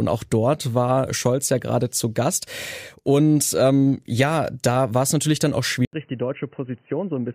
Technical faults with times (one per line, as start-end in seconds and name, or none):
5.85-7.34 input switched to a poorer device